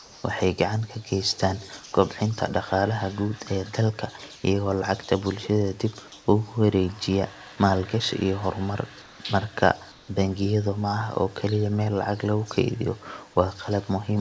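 A speech recording with two kinds of fault. Comfort noise in place of the background appears at 0.00–0.24, 4.36–4.44, 9.02–9.20 and 9.92–10.08 s. In these gaps the real room background becomes a flat, featureless hiss, about 1 to 3 dB quieter. This is likely discontinuous transmission filling pauses with synthetic noise. An echo leak follows at 1.21–1.92 and 2.31–2.69 s. A faint copy of the speech returns 363 ms late, well below the direct voice. The likely cause is a far-end loudspeaker whose echo canceller let some pickup through. The audio passed through a call codec with nothing above 8 kHz.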